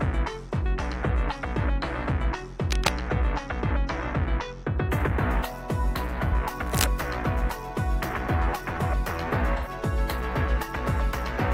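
From 2.66 to 2.89 s, a dense, uneven burst of scratching and rustling sits over the sound, roughly as loud as the sound itself. This is cable scratch noise, likely from a worn cable, connector or control being moved so that its contact resistance jumped about rapidly and fed bursts of noise into the signal. The same scratching returns from 6.65 to 6.85 s at a similar level.

Between those two scratches, from 6.28 to 6.34 s, a brief smeared, phasey patch replaces the clean sound for about 43 ms. That is AAC frame loss with concealment. The gap fits a single lost frame, which the decoder covered by rebuilding the last good spectrum with altered phase and energy. A longer patch follows from 9.56 to 9.68 s, where about 85 ms are concealed, consistent with two consecutive frames. Because the decoder kept guessing for longer, the smeared, noisy texture there lasts longer.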